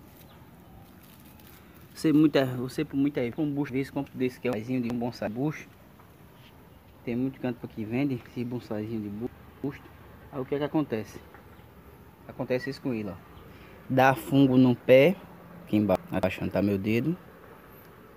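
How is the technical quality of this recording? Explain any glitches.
The recording has four short scrambled passages, all frames out of order. At 3.32–4.07, 4.53–5.27, 9.27–10.01 and 15.68–16.23 s, two adjacent blocks of frames, about 0.37 s each (0.28 s in the last), play swapped. This gives a garbled flutter. On a spectrogram these show as abrupt vertical discontinuities where the energy contours jump mid-gesture. On a waveform they show as envelope steps. No time is lost.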